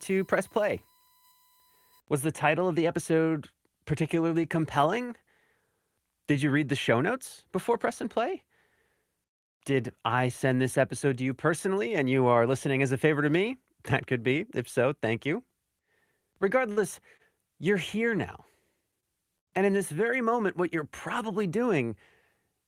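A speech clip with two kinds of fault. From 0 to 2.0 s a steady USB whine sits at 1 kHz, roughly 35 dB below the speech. It matches the bus's 1 ms frame rate, leaking into the audio through power or ground. Then come four short stalls from a late packet. They fall at 16.71 to 16.80 s, at 17.17 to 17.22 s just before "you're here now", at 19.00 to 19.06 s just after it, and at 19.39 to 19.50 s. Each time the jitter buffer emptied. The last sound is held for 53, 26, 24 and 83 ms, giving a slight buzz or dip. Nothing is lost; the speech simply resumes that much later.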